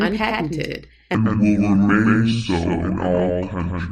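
From the start, every syllable has a dry, slightly quieter echo about a tenth of a second behind it: a doubled audio track, likely a second capture through a slower path. From 1.15 s to the end, the speech drops about ten semitones and drags at 0.61 times normal speed, a section at the wrong speed, likely played against the wrong clock.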